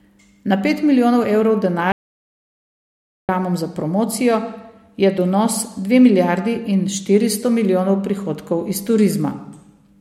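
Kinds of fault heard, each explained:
Audio dropout to silence: after "pet milijonov evrov" the speech cuts out at 1.92 s into dead silence with no room tone, returning at 3.29 s with "za promocijo"; about 1.37 s is lost, likely from the input briefly disconnecting or muting while recording continued.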